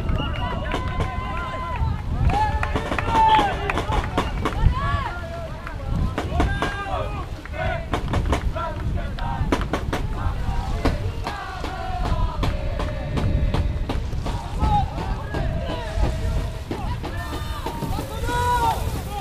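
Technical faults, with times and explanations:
17.17 to 19.21 s, pre-emphasis left on: the treble lift of a 50 µs FM curve was never undone, leaving 10 kHz about 11 dB up against 1 kHz, so the sound turns thin and bright; a spectrogram shows the upper bands abruptly brighter.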